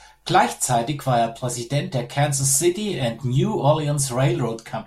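There are no technical faults to describe in time order.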